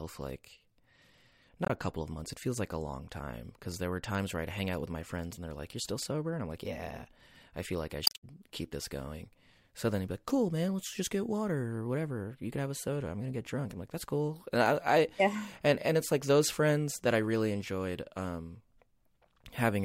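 At 1.63 to 1.70 s, just before "a couple of months", and again at 8.03 to 8.23 s, between "I feel like I" and "keep this going", damaged data in the compressed stream makes the decoder lose sync, producing a brief glitch. Each shows as an abrupt break in the waveform.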